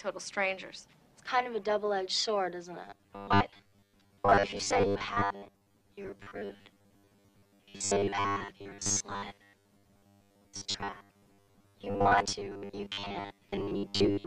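From 2.85 s to the end, the audio stream is likely being starved: fresh material arrives too rarely, so playback keeps looping the most recent short slice instead of advancing. The result is robotic sound from repeated short buffers. A steady 100 Hz buzz, which fits a loop about 10 ms long, is stamped onto the sound. For most of that span the real audio is skipped, leaving a rigid, metallic drone that only loosely tracks the underlying sound.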